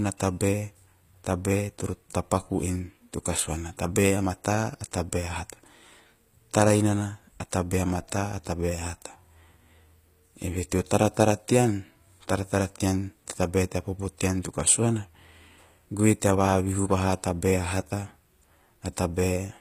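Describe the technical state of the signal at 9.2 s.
At 9.2 s the speech carries the same damage as the rest of the clip, most likely from HE-AAC compression, with a sound that points to a low bitrate around 24 kbps. Only the lower spectrum is coded directly, and the treble is rebuilt by copying lower bands upward under a coarse envelope, so its harmonics no longer line up with those below. The top end stays bright but synthetic, with gritty, lispy sibilance, and nothing remains above 15.5 kHz.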